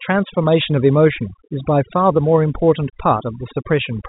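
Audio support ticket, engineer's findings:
Overdone noise removal, throughout. Denoiser too aggressive: bands near its noise estimate cut off, quiet speech lost with them. Twinkling near-silent background. Carried over G.711 mu-law telephone band, nothing above 3.9 kHz.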